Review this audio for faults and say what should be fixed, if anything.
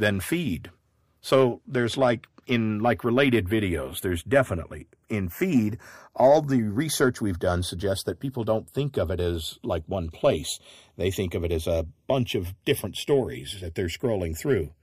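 The two channels are drifting apart across the whole speech clip. They were captured on devices running off separate clocks, about 30 ppm apart, so the delay between left and right keeps sliding and reaches roughly 0.4 ms by the end. Fold it to mono and the comb-filter notches sweep slowly through the spectrum, giving that slow flanging swirl. To fix it, resample one channel to realign them, and next time lock both devices to a shared word clock.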